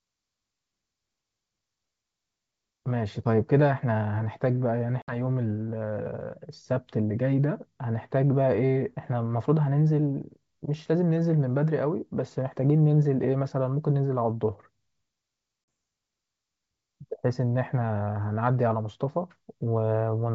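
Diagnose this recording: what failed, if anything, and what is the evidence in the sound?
Packet loss on an ADPCM call, at the network stage. Hard silent gaps open at 5.02–5.16 s, with 60 ms lost, and at 15.64–15.68 s, with 40 ms lost. The decoder's predictor and step size lose track of the sender's. Speech returns slightly distorted, then settles.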